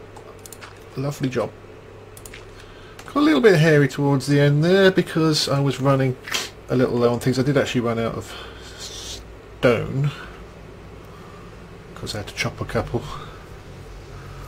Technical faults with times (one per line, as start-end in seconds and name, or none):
none